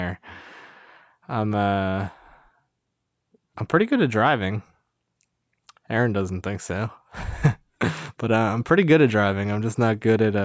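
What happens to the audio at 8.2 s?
At 8.2 s the audio is intact, with the speech carrying on with no dropout, click or other fault.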